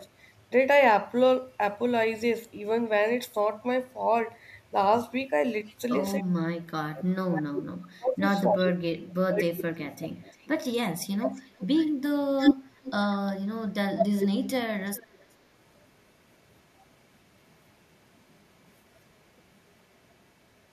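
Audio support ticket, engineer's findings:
Echo leak: delayed copy of the speech returning at 5.67–5.75 s, 7.82–8.69 s, 9.92–13.32 s and 13.97–15.26 s. Likely far-end echo canceller leaking loudspeaker pickup. Delay lengthens from 323 to 337, 354 and 370 ms. Level climbs from very faint to almost matching the direct speech. Unlike double-talk suppression, this adds sound: a lagging second copy rather than loss.

Speech suppressed in double talk: talker dips and drops out in pieces across 6.21–9.79 s, roughly three seconds affected in total, deepest cuts about 35 dB. Likely the canceller attenuating its own talker along with the loudspeaker echo during simultaneous talk. Distinguished from echo leak by missing speech, not a repeated copy.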